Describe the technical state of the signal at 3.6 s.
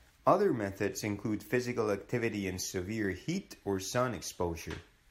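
At 3.6 s the speech signal is intact, with no audible technical fault at that point.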